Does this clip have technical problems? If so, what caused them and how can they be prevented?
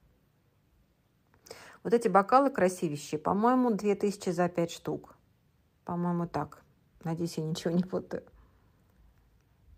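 No, nothing stood out on listening, so there is no problem to explain or prevent.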